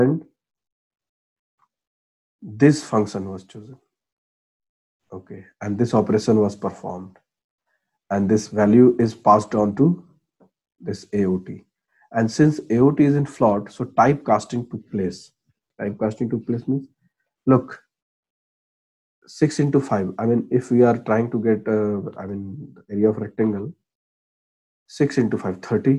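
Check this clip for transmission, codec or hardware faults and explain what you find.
No transmission, codec or hardware faults can be heard anywhere in the clip. Nothing in the audio calls for further explanation.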